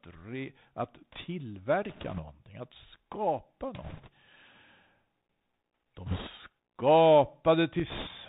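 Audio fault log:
throughout: Bluetooth CVSD headset codec. The speech passes through a narrowband headset link where each sample is a single up-or-down bit at what sounds like a 64 kbps rate, with a step size that keeps adapting. Nothing survives above 4 kHz, loud high-frequency sounds outrun the step and smear, s sounds turn scratchy, and a granular hiss sits under the speech. A spectrogram shows a hard ceiling at 4 kHz and a grainy noise floor under the harmonics.
1.89–2.21 s, 3.83–4.09 s, 6.06–6.29 s, 7.90–8.08 s: bit errors on a Bluetooth voice link. In four short bursts, flipped bits on the one-bit CVSD stream add a rushing, crackly noise to the speech. The first two bursts are lighter, with roughly 2 percent of bits wrong, and the last two are rougher, at roughly 4 percent. Because every bit moves the signal by only one small step and the error fades as the step adapts, there are no loud clicks. 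A waveform shows fuzzy thickening rather than spikes, and a spectrogram shows broadband speckle in those spans below the 4 kHz ceiling.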